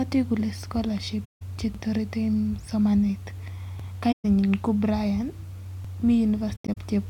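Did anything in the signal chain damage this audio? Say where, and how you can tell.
Yes. The speech drops out into soft-edged holes three times: 1.24 to 1.42 s (about 170 ms), 4.11 to 4.25 s (about 130 ms), and 6.55 to 6.78 s, where the gaps are scattered across about 210 ms with the longest run roughly a tenth of a second. This is AAC frame loss with muting, at the codec or network stage. Whole frames never reached the decoder, so it zeroed their spectrum, and the overlapping transform windows fade the sound down and back up instead of cutting it hard.

Separately, a short stutter recurs at 1.75 to 1.80 s, 3.80 to 3.85 s and 5.85 to 5.90 s. Each time, a 50 ms piece of sound plays twice, and the repeats fall about 2 s apart. That regular spacing points to overlapping chunks at the buffer or processing stage. The audio was handled in 2 s blocks, and each new block began 50 ms before the previous one ended, so every join replays that overlap.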